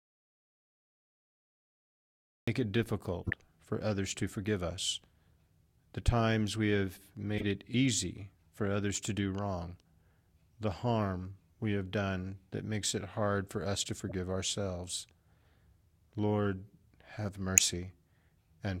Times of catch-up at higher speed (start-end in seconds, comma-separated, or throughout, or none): none